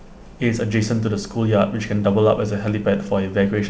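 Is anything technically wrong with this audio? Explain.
No, nothing stood out on listening to this speech, which carries the band-limited sound of a call path with nothing above 8 kHz.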